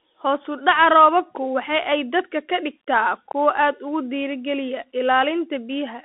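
Bluetooth CVSD headset codec damage runs through this whole speech clip: band-limited to roughly 250 Hz–3.5 kHz, nothing above 3.8 kHz, one-bit slope tracking adds granular hiss and scratchy sibilants, consistent with 64 kbps CVSD.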